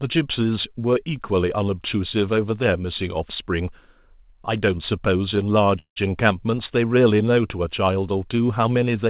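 At 5.79 s the speech stops and a brief fading buzz stands in for about 171 ms, likely a call audio freeze where delayed packets emptied the jitter buffer. The waveform shows a decaying tail, then roughly 110 ms of near-flat silence, resuming at 5.98 s without lost material, all within a spectrogram capped at 4 kHz.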